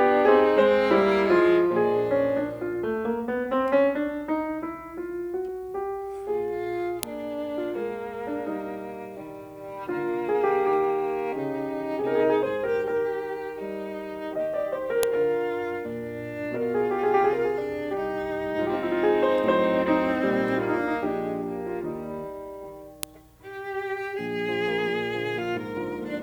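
At 7.03 s, 15.03 s and 23.03 s the music is broken by a sharp, loud snap, a file header played as audio. The clicks fall exactly 8 s apart, matching the joins between separately written pieces whose header bytes were left in and played as samples. Each lasts only a millisecond or so. On a waveform it shows as a narrow spike standing clear of the music, and on a spectrogram as a thin vertical line spanning the full frequency range.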